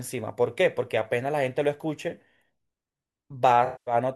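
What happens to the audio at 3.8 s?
Around 3.8 s you're in the middle of an AAC frame loss with concealment, running from 3.65 to 3.94 s. The decoder lost a run of frames, which points to roughly ten AAC frames going missing, and covered the gap by reusing the last good spectrum with shuffled phase and interpolated energy. You hear the speech smear into a hazy, noisy wash before the real signal returns.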